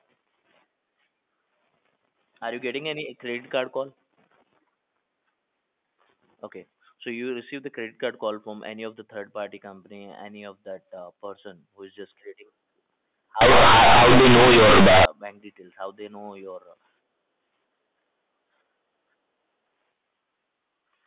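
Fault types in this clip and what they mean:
Companded audio read as linear, 13.41 to 15.05 s: for this stretch the mu-law telephone bytes are played back as plain linear 8-bit samples, with no expansion step. Because the logarithmic code puts quiet and loud values side by side, every change of sign throws the output across roughly half its range. Soft passages become as large as loud ones and the wave is badly bent, so the speech becomes a harsh, loud buzz with heavy noise filling the gaps.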